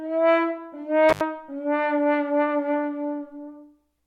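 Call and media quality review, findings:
Intermittent contact, 1.09 to 1.21 s: loose cable or plug briefly opens, about 78 ms dropout of the everyday sounds, crackle at both edges, faint hiss during the gap.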